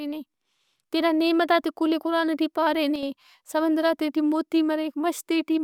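At 2.96 to 3.03 s the speech dips abruptly by about 6 dB for 70 ms, likely one channel drops out before the mono sum.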